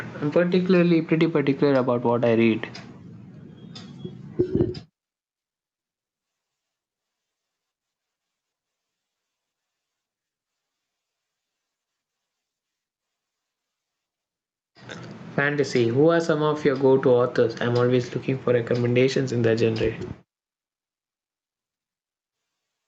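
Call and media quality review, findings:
Gain pumping, entire clip. Input gain likely set far too hot, with a fast limiter clamping down on each loud syllable. Level swings around 10 dB, so the dynamics are squashed. Band tops out near 8 kHz, consistent with Opus.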